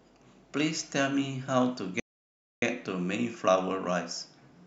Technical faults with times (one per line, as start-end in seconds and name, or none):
2.00-2.62 rebuffering stall